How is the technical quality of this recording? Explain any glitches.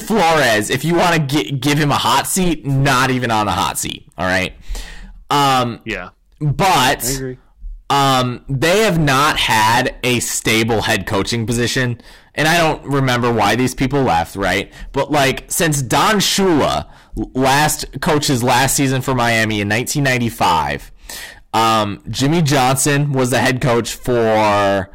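The quality's poor: hard clipping runs through the whole speech clip. It's pushed about 22 dB past full scale, so roughly a fifth of samples get flattened, giving harsh fuzz on everything loud.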